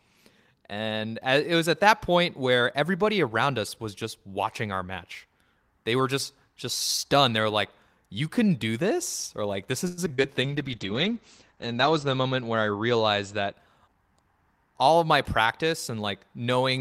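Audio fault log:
9.87–10.26 s, repeated packet loss (robotic sound): five gaps patched by extending prior sound, longest 102 ms, leaving choppy, robotic speech with pieces missing.
10.42–13.60 s, call bitrate drop: encoder rate fell from 32 to 10 kbps and bandwidth narrowed from 20 to 8 kHz, making speech coarse and muffled.
13.88–14.34 s, jitter buffer speed-up: receiver trimmed roughly 70 ms of pitch periods to shed excess delay, so speech runs about 115% speed before "all of my".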